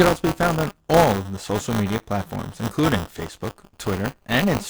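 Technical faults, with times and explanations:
Throughout, buffer tearing: a robotic buzz at 200 Hz rides on the speech, pointing to a period of about 5 ms. The writer and reader have slipped, so about a tenth of each period replays audio roughly 20 ms old, with hard joins.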